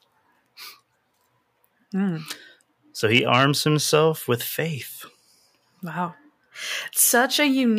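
No technical faults can be heard anywhere in this speech recording; the signal stays intact and steady throughout.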